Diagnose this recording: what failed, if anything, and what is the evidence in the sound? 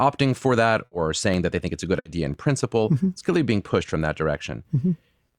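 Periodic USB or driver dropouts run from 0.33 s to 5.35 s, once every 1.0 s, about seven in all. At the driver or buffer stage, a blocking task steals roughly a millisecond of audio each time and leaves silence. The result is regular ticks, heard only under speech.

A burst of packet loss hits at 0.85 to 0.94 s and again at 1.99 to 2.08 s, on the network. Each time, 60 ms of the last sound is stretched and faded into a held buzz or hiss. Speech then resumes with 60 ms skipped.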